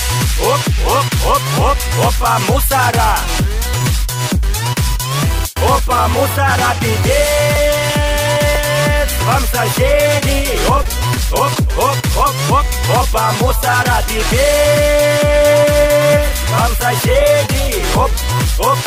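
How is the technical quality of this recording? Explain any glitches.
The recording has packet-loss glitches in two places; nothing else can be judged here.

Short concealed packet loss at 3.78–3.85 s, 3.82 s and 4.34–4.36 s: about 10 ms of audio arrived too late each time, so the receiver extended the preceding sound to cover the hole and crossfaded back. Each instance is a brief smear or wobble.

Scattered short gaps between 10.83 and 11.56 s: about five separate packets went missing, none longer than about 20 ms. Each hole was patched by continuing the prior sound, so this stretch has several small hiccups and ticks.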